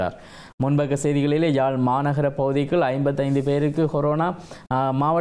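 Nothing technical stands out here; the sound carries on without any dropout, glitch or other fault to point to.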